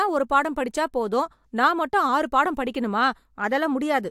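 No technical faults can be heard anywhere in the recording; the signal stays steady and intact throughout.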